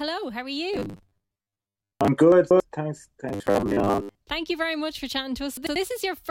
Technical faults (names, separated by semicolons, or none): robotic sound from repeated short buffers; chunks out of order